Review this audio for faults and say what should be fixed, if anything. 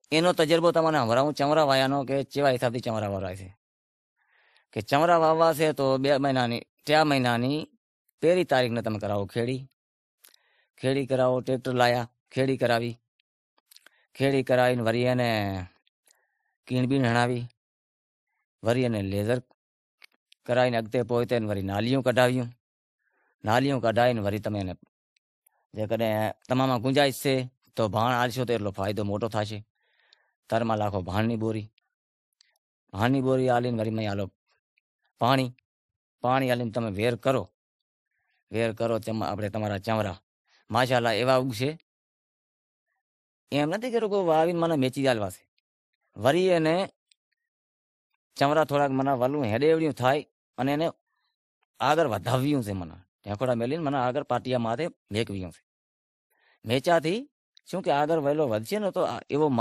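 Throughout the clip, the speech carries two layers of coding artefacts, with nothing above 14.1 kHz. The likely cause is transcoding between lossy codecs: a low-rate MP3 pass near 43 kbit/s, re-encoded to WMA at 96 kbit/s, which spends bits on the MP3 damage. To prevent this, encode once from the original uncompressed source.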